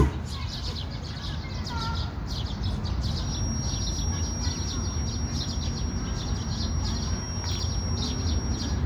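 A feedback whistle enters at 3.15 s and continues to the end at 8.86 s: a thin, steady tone near 5.6 kHz, sitting roughly 10 dB below the sound and swelling and fading slowly in level. It is likely caused by a loudspeaker-to-microphone loop held just at the edge of feedback.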